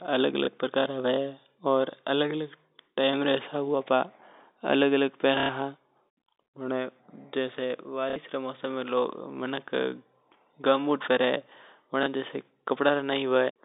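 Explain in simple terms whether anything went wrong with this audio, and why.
Pieces of the audio stream got lost in transit, and the receiver filled each gap by replaying the last piece, which is packet loss with last packet repeated. You hear small blips at 0.45 s and 12.03 s, lasting 30 ms each, and brief robotic stutters at 5.4 s and 8.1 s, lasting 90 and 60 ms, which fits 30 ms packets. All of this plays over the narrow, telephone-like sound of G.711 telephone coding.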